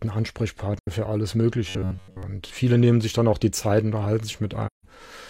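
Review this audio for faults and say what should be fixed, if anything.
AAC frame loss with muting at 0.79–0.88 s and 4.66–4.85 s: dropouts of about 85 ms and 171 ms, consistent with two and four zeroed frames, faded by overlapping windows. Prevent with packet retransmission, forward error correction or decoder concealment that interpolates instead of muting.

Robotic sound from repeated short buffers at 1.69–2.23 s: a rigid 93.8 Hz buzz, likely from re-playing a roughly 10.7 ms buffer while most of the real audio is skipped. Prevent by enlarging buffering so new audio arrives on time.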